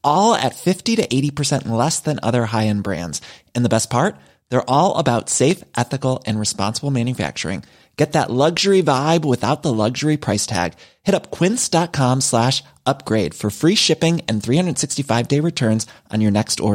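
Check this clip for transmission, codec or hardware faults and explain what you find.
Two brief faults are audible in the speech, both sharp single clicks, at 5.51 s and 11.09 s. Each is likely caused by dropped samples: well under a millisecond of the stream goes missing, so the waveform steps abruptly from one value to a later one instead of continuing smoothly. The gap is far too short to remove any audible sound; what remains is the discontinuity itself, heard as a crisp tick and seen as a thin vertical line across the spectrum.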